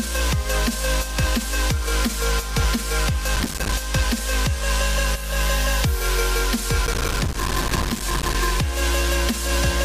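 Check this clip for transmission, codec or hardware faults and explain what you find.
There is processor overload crackle in two bursts: from 3.36 to 3.72 s, and for longer from 6.86 to 8.35 s. The processor could not fill its audio buffers on time, and it missed many deadlines in a row. Each missed buffer drops out to silence with hard edges. The gaps are very short, which fits a buffer of around 5 ms. Strung together, they make a gritty, tearing crackle on top of the sound. It stops once the load clears.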